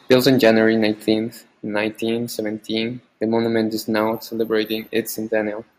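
From 0.11 to 0.51 s the loudest syllables take on a harsh, crackling edge, with a small share of the peaks flattened. This is microphone overload: the input was likely driven about 4 dB past the converter's limit, so the tops of those peaks were cut off.

At 0.14 s, and again at 1.14 s, the speech and the background drop together in a single sudden step, first by about 3 dB and then by about 4 dB. This is the microphone volume being stepped down, likely by call software reacting to the overloaded input and lowering the device's gain.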